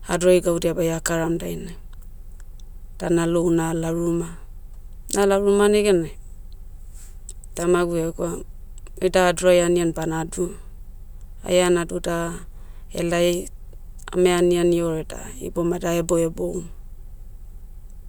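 No technical faults can be heard in the speech recording, and the signal stays intact and continuous from beginning to end.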